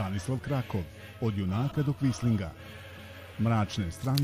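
At 1.71 to 1.76 s, a corrupt frame is decoded. Flipped bits make the decoder put energy at the wrong frequencies. A short chirp is heard, peaking near -30 dBFS. The same fault returns at 2.97 to 3.0 s, a slightly quieter blip, about a couple of damaged frames each.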